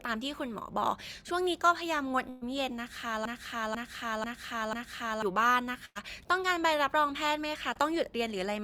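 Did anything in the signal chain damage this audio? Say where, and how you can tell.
Yes. Network stage: bursts of packet loss at 2.29 to 2.43 s and 5.85 to 5.97 s. About 120 ms and 100 ms of sound are replaced by a continued, fading fill before the audio resumes further on.

Playback or streaming stage: a broken-record loop from 3.25 to 5.22 s. A 0.49 s fragment repeats exactly four times back to back, likely from a stalled player or stream resending its last buffer.

Network stage again: short concealed packet loss at 7.73 s. About 20 ms is missing and bridged by extrapolated sound, heard as a brief smear before the real audio blends back in.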